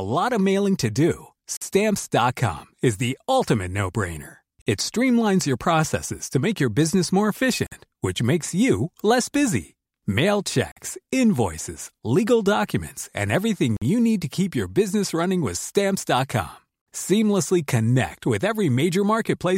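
At 1.57, 4.62, 7.67, 10.72, 13.77 and 16.82 s the speech drops out for 50 ms with hard edges: a gap between chunks, with silence inserted after every 3-second block.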